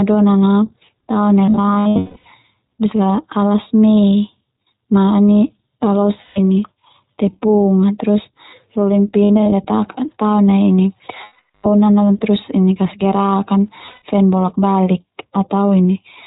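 The iLBC codec coding runs through the whole of this speech recording. All content above 4 kHz is missing, and the voice has a plainly audible rough, synthetic edge. That character comes from each 20 ms frame's excitation being coded on its own at a low rate, which fits 15.2 kbps iLBC. Lost iLBC frames interrupt it five times. From 1.46 to 2.27 s, just after "a tao nai", about 580 ms of audio drops out across 800 ms, the longest single gap about a fifth of a second. From 6.23 to 6.38 s there is a 140 ms gap. From 9.24 to 9.52 s, after "a terus rolin", 140 ms is lost in short pieces spread over 280 ms. From 11.24 to 11.67 s, 400 ms is gone. From 13.86 to 14.02 s, after "terus kasgerak an", 140 ms is lost within 160 ms. Each gap is filled by the decoder repeating the last pitch cycle blended with noise, so it sounds like a held, buzzy or breathy vowel that fades over the longer losses. Because iLBC frames decode independently, the speech snaps back cleanly as soon as packets arrive again.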